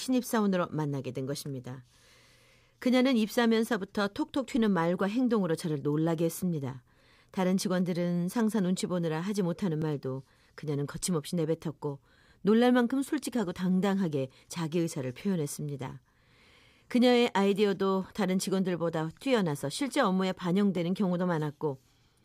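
At 9.82 s and again at 20.77 s the speech has a repeated buffer. New audio arrived late, so the device played its last block again, a piece about 5 ms long heard once more before playback moved on. A repeat that short has a hard join at each end and comes across as a tiny click rather than a stutter. Unlike a dropout, there is no silent gap, and essentially no audio is lost.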